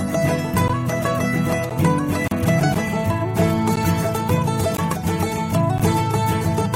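The music first breaks at 0.68 s and 1.69 s with gaps between chunks: short holes of about 13 ms that cut the sound off cleanly and let it resume without anything missing. The audio arrived in one-second chunks, and a sliver of silence was left at each join. The waveform drops away to near silence, and the spectrogram shows a thin, hard-edged vertical blank stripe through every band.

At 2.28 to 2.31 s there is a gap at a join of encoded pieces, about 36 ms long. The pieces were encoded separately and joined without trimming, so the encoder's start-up silence and the padding of the final frame both remain in the stream. This hole is wider than the chunk gaps, and its edges are smeared rather than razor-sharp. The music picks up exactly where it stopped.

The chunk gaps then continue at 2.74, 3.76, 4.77 and 5.78 s. Together with the two earlier ones, they fall at a steady one-second spacing. 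Each shows the same narrow, evenly spaced break in the waveform and the spectrogram.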